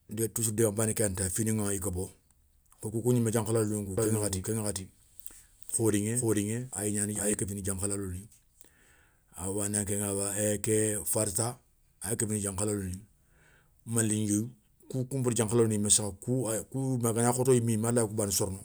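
From 3.98 s to 7.34 s, the speech is doubled. A second full-band copy trails the original by about 400 ms at roughly equal level. It has no decay or room colour. It starts and stops abruptly. The likely cause is a second capture path or misaligned edit.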